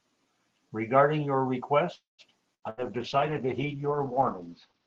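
At 1.95 s the speech stops and a fading buzz or hiss holds the last sound. It sinks to silence for about 160 ms. Speech returns at 2.22 s with nothing lost, just late by about 0.23 s. This is a call audio freeze, likely from delayed packets draining the jitter buffer.

From 2.55 to 2.65 s comes a burst of packet loss. The receiver stretches the last sound into a dying buzz or hiss for about 75 ms. Then the speech jumps ahead. About 80 ms of audio is gone.

At 2.66 s a call bitrate drop begins and lasts to the end. The speech turns rough and watery. The top end falls from 12 kHz to 8 kHz, so it also sounds muffled. This fits an Opus rate cut from about 32 to 8 kbps.

A second burst of packet loss runs from 2.70 to 2.81 s. Again a fading buzz or hiss fills roughly 75 ms. Then the speech resumes further on, with about 80 ms missing. It comes inside the low-bitrate stretch.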